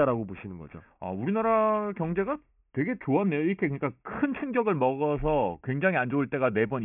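Aliasing runs through the whole speech clip. The band stops hard at 3 kHz, which fits a drop to a 6 kHz rate with no filter first. Energy above that folds back as false tones, about 20 dB below the signal. Sibilants turn gritty and metallic.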